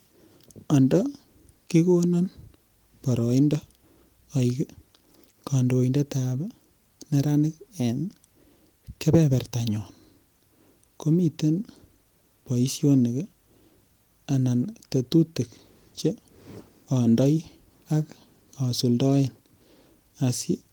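There are no technical faults to describe in time order in this speech clip.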